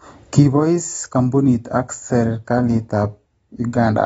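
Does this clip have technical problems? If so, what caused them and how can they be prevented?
Yes. AAC compression damage runs throughout. Nothing sounds above 7.7 kHz, leaving dull, smeared speech. The sound likely fits AAC-LC at about 24 kbps. Encoding at a higher bitrate would prevent it.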